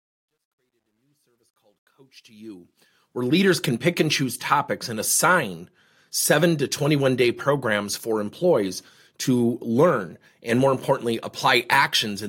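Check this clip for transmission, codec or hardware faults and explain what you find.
One fault stands out, at the start of the speech. Truncation distortion on a fade runs from 0.0 to 3.39 s, worst until 2.04 s. The fade keeps too few bits without dither, which fits a 12-bit stage. The quiet part turns gritty.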